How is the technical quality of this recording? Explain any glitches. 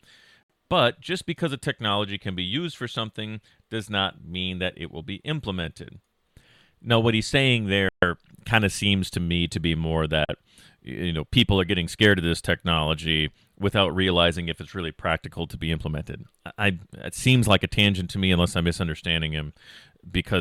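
The speech drops out three times, each a short, hard cut to silence before it resumes. The first gap is at 0.43 s and lasts about 67 ms. The second comes after "what he's saying" at 7.89 s, a 138 ms hole before "kind of seems to". The third falls after "me to be more" at 10.25 s, a 41 ms gap before "you know people are". These are likely Bluetooth stalls: radio interference delays packets, the headphones' buffer empties, and playback freezes until the resent data arrives.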